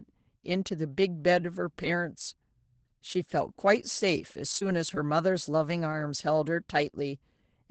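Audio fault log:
4.51, 4.55, 4.61, 4.85, 4.96, 5.38, 5.92 and 6.00 s: lost packet rebuilt from error correction. Each 20 ms packet went missing, and the decoder played the coarse low-bitrate copy carried in the next packet, so nothing drops out but the sound turns briefly rougher and noisier. On a spectrogram each appears as a 20 ms column of smeared, grainy energy with blurred harmonics. The waveform stays continuous, with slightly ragged texture rather than a gap.
4.59 to 4.63 s and 4.95 to 4.98 s: short concealed packet loss. In each, about 20 ms of audio arrived too late, and the receiver covered the first 14 ms or so by extending the preceding sound before blending into the rebuilt packet that follows. This is heard as a quick smear or wobble inside the burst of roughness. A spectrogram shows the preceding sound carried on across the patch, and the waveform shows continued material instead of the natural shape.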